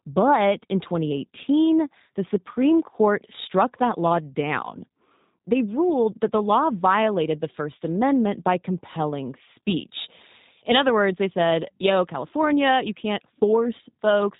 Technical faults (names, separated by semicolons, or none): G.729 codec